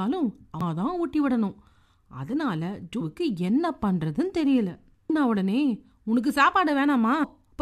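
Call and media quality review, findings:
Damaged data in a compressed stream: corrupted frames make the decoder misread data, lose sync and hunt for the next frame header. Heard as brief glitches in the speech at 0.61 s, 3.00 s, 5.09 s and 7.22–7.24 s, each lasting about 14–20 ms.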